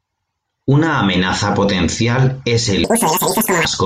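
Speech that, from 2.84 to 3.65 s, right after "amenaza potencial es", jumps to double speed and an octave up: audio read two samples at a time. On a spectrogram the harmonics spread twice as wide and climb; the waveform looks squeezed in time.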